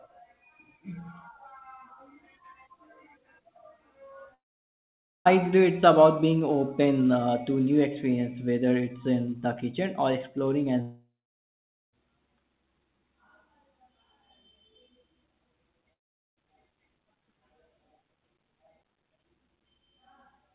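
Speech cuts out at 4.34–5.27 s, 10.81–11.94 s (after "the kitchen or exploring") and 15.93–16.38 s. Each gap begins with a brief fading buzz, then silence, up to about 0.9 s. Speech resumes with material missing, likely a long network dropout on the 4 kHz-limited call path.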